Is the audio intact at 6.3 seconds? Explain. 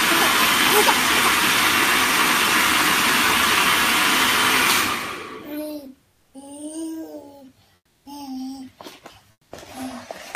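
No. From 6.11 to 6.33 s there's comfort noise in place of the background, likely from discontinuous transmission: a steady, featureless hiss about 1 dB quieter replaces the real background.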